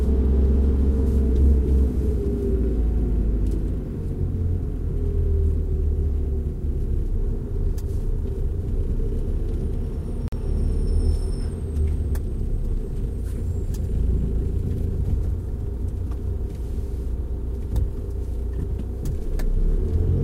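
At 10.28 s the continuous sound breaks for about 44 ms, until 10.32 s. This is a gap at a join of encoded pieces: two separately encoded segments were butted together without trimming, so the encoder's start-up delay and last-frame padding remain as silence between them. A dropout loses material and resumes later, but here the sound picks up exactly where it stopped. The edges are softened by the codec rather than hard clicks.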